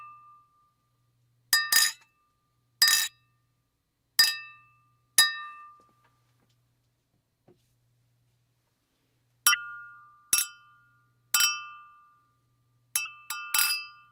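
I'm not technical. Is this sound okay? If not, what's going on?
No. There are three brief glitches, at about 3.06 s, 9.52 s and 13.05 s. Each lasts roughly 30 ms. The sound skips forward and gives a chirp, a burst of noise or a short gap. This is likely a broken MP3 bit reservoir. MP3 files let each small chunk borrow space from the chunks before it. Here, some chunks seem to have gone missing. The next chunk then reads the wrong data, so the audio jumps and briefly garbles.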